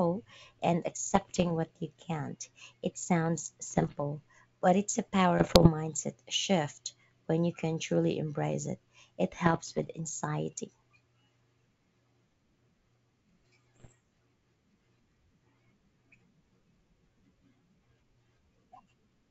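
Bit errors on an ADPCM link corrupt the G.722 stream at 1.10–1.52, 3.70–4.03, 5.39–5.69, 9.46–9.88 and 13.75–13.93 s. Each flipped bit throws off the decoder's step size and predictor, so the speech breaks into pops and rough, uneven bursts.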